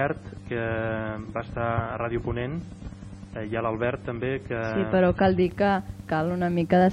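For the first 5.43 s the audio sounds dull and smeared, with nothing above about 10.5 kHz and stronger codec artefacts. It then brightens abruptly, without a gap. That is an adaptive stream starting at a low bitrate: the opening fits roughly 24 kbit/s MP3 before the player steps up to about 128 kbit/s.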